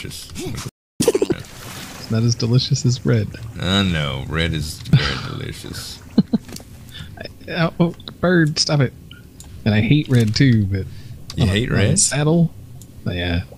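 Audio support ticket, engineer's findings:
Playback stall, 0.68–1.01 s: output drops to silence for about 308 ms mid-flow. Likely player buffer underrun or blocked audio thread.

Catch-up at higher speed, 1.01–1.32 s: 2x playback, pitch up roughly ten semitones. Player resampling its backlog to recover lost time, then returning to normal rate.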